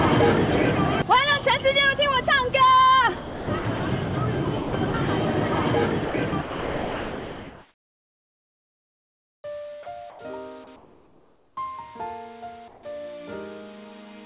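Between 3.17 and 3.92 s, 4.58 and 4.94 s, and 6.05 and 9.44 s, the sound is chopped by the voice detector, likely because the sender's detector kept switching transmission off and on. Synthetic fill replaces about 420 ms, 180 ms and 3.2 s of sound respectively, so the audio stutters.

From 9.83 to 9.86 s, 30 ms of sound is dropped by the voice detector, likely because it mistook a quiet portion for background and stopped sending. The sound briefly gives way to steady noise before transmission resumes.

Comfort noise in place of the background appears at 9.83 to 10.19 s, 10.76 to 11.57 s and 12.68 to 12.83 s, likely from discontinuous transmission during pauses. The real background, about 33 dB and 28 dB below the loud passages in the latter two, becomes a smoother, featureless noise, about 5 dB and about 2 dB quieter respectively. Throughout, the band stops at 4 kHz, which fits a G.711 call codec.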